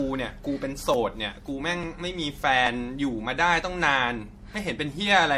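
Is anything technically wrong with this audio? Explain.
Yes. Throughout the speech there is generation loss, likely from repeated MP3 encoding at around 64 kbit/s, something like seven passes. Each re-encode quantises again on a shifted frame grid, so the noise and spectral holes stack up. The result is swirly, hollow and smeared, with blurred consonant attacks and nothing above 16.2 kHz.

At 0.94, 1.84, 2.67 and 4.54 s there are likely dropped buffers from an overrun. Each time, the samples were overwritten before being read, so roughly 20 ms is lost. The two sides are butted together without a gap, giving a small jump forward in the speech.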